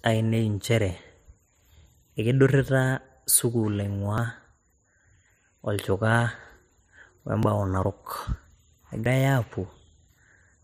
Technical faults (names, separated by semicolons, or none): dropped buffer (overrun)